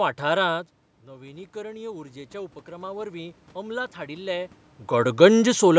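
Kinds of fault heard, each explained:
Automatic gain rising: Just after half a second the speech drops by about 14 dB, as the talker moves away from the mic. The call's gain control then spends the next four seconds or so, up to about 4.6 s, creeping its gain back up by about 10 dB. You can hear the room noise swelling along with the speech as it climbs, until the talker moves again around 4.5 s.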